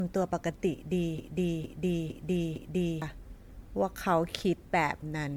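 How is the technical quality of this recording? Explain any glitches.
The recording is technically poor, with two clear faults.

Throughout, the speech has generation loss: a swirly, hollow, smeared sound with blurred attacks and nothing above 19.9 kHz. This likely comes from about seven rounds of MP3 encoding near 100 kbit/s.

From 1.18 to 3.02 s there is a broken-record loop. A 458 ms fragment repeats four times back to back, and the audio that should have played there is lost. A stalled stream likely resent its last buffer.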